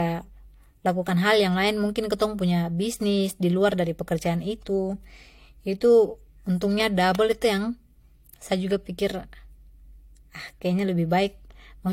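Throughout, the speech was likely transcoded between lossy codecs, fitting HE-AAC then AAC-LC. Nothing is heard above 16.3 kHz, and both codecs' artefacts blur together.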